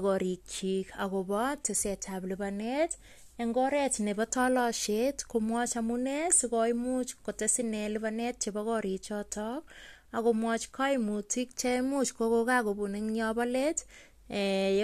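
No technical faults are audible.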